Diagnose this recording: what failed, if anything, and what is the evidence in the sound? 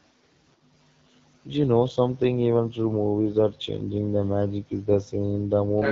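The failure is at the codec stage. The whole clip carries AMR wideband (HD Voice) codec damage, and it is plainly audible. The speech sounds rough and raspy throughout. The top of the band, above about 6.4 kHz, is filled with shaped noise rather than real detail. That grain points to one of the two lowest AMR-WB rates, which fits 8.85 kbit/s. At that rate the pulse-driven vocal tract model is starved of bits, so the excitation turns coarse.

At the very end, from 5.77 s to the end of the clip, the other side's voice leaks through. A second voice appears, roughly as loud as the main speech. This is a call-processing failure, likely from the echo canceller. The talker's device plays the far end on a loudspeaker, and the canceller did not remove it from the microphone signal. The leaked scrap arrives at full strength, not as a faint residue.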